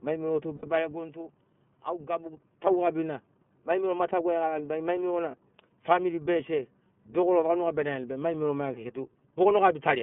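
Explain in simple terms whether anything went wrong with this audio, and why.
Yes, two things went wrong. Throughout the clip, the speech has passed through the iLBC codec, a phone-call compression method. It keeps only a narrow band of sound, roughly 150 Hz to 3.4 kHz, so voices sound thin and boxed-in, like a phone line. It also cuts the sound into 30 ms slices and rebuilds each one separately, which gives the voice a slightly rough, synthetic edge. A plain bandwidth limit would sound muffled but stay smooth.

There are also two short glitches from lost iLBC frames. From 0.56 to 0.67 s, two slices of audio went missing, about 60 ms in total. At 5.30 to 5.35 s, one 30 ms slice was lost. Instead of leaving silence, the decoder fills each gap by repeating the last bit of voice with some noise mixed in, so you hear a brief held, buzzy sound. A dropout would be silent, and a click would be sharper. 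The voice recovers almost at once.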